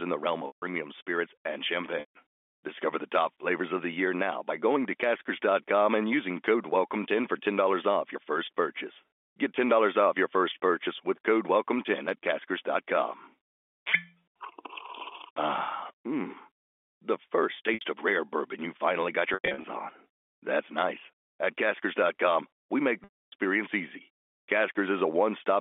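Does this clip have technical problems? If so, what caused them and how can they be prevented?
Yes. Packet loss with pitch repetition occurs at 0.47–0.62, 2.00–2.14, 17.74–17.81, 19.34–19.64 and 23.04–23.32 s. Lost packets, about 70 to 280 ms at a time and consistent with 10 ms packets, are bridged by repeating the last pitch period. The short gaps sound like a held buzz, and the longer ones fade to silence before the speech cross-fades back. The 19.34 s loss is scattered over 300 ms. Prevent it with a larger adaptive jitter buffer, forward error correction or packet redundancy, and a less congested network path for the telephone-band G.711 stream.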